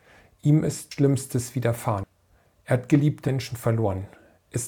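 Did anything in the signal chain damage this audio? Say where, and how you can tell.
Yes, at the codec: compressed frames skipped at 0.91, 2.03 and 3.28 s. The sound leaps ahead about 100, 200 and 100 ms, multiples of a 32 ms frame. Each join cuts straight to later material, and a spectrogram shows an abrupt content change there.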